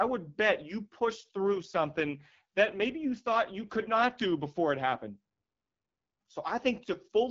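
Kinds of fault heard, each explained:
AMR rate drop: From 1.10 to 4.22 s, between "would bet you" and "before it happened", the speech turns rougher and more synthetic with no gap or bandwidth loss, which fits the HD Voice codec stepping from 12.65 to 8.85 kbit/s, trading bits for error protection.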